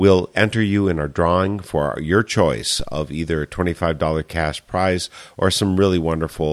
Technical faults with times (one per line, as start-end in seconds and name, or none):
2.80-3.11 phantom power thump